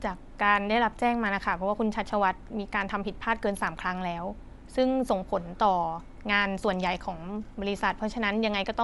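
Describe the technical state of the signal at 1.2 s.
At 1.2 s, as throughout the clip, the speech sounds grainy and breathy with nothing above 11.5 kHz, likely Bluetooth LC3 compression filling the thinned upper spectrum with noise, consistent with 10 ms frames around 48 kbps.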